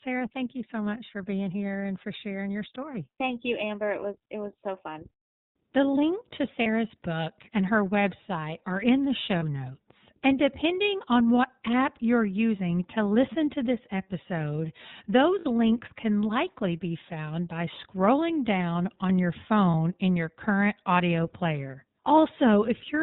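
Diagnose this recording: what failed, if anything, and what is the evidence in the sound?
iLBC codec, throughout the 23 s of speech: this is a codec-stage fault. Nothing above 4 kHz survives, and the speech has a plainly audible rough, synthetic edge. Each frame's excitation is coded on its own with no carry-over from the previous frame. The narrowband ceiling and coarse grain fit iLBC's 13.33 kbps mode with 30 ms frames.

Lost iLBC frames, a network-stage fault, occur at 6.62 to 6.67 s (between "link to" and "book and her website"), 9.39 to 9.43 s (after "are in the show"), 15.39 to 15.45 s, and 19.71 to 19.74 s (between "scrolling down on your" and "in your current audio"). Each gap sounds like a brief held, buzzy vowel. The decoder repeats the last pitch cycle mixed with noise. Gaps near 30 ms point to one missing frame, and the 60 ms one to two. The speech recovers almost at once because frames stand alone.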